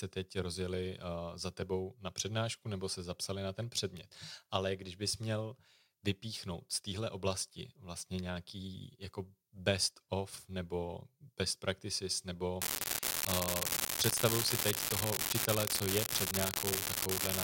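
From 12.62 s to the end of the speech, an unreliable data bit sets in: one marginal data line flips at random, adding identical spikes of about -12 dBFS. The result is a constant crackling fizz that continues unchanged through pauses.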